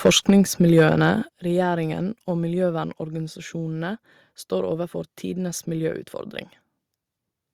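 From 0.05 to 0.3 s the speech crackles harshly, with peaks pushed about 7 dB past the converter's limit. This is microphone overload, likely from input volume set too high so the converter flattens the waveform tops. On a waveform the peaks appear squared off, and a spectrogram shows broadband smearing above the voice. At 0.30 s the speech and background drop about 3 dB at once, likely because the call software stepped down the microphone volume after that distortion. This shows as an abrupt step in the waveform envelope.

Between 0.77 and 0.82 s the microphone overload returns, about 3 dB over, with a fair share of samples clipped into a gritty, buzzy edge. Flat-topped peaks and vertical streaks of high-frequency energy mark it. At 1.29 s the microphone volume is stepped down again, this time by about 8 dB. The level falls sharply, leaving a clear downward step in the waveform and a dimmer spectrogram from that point.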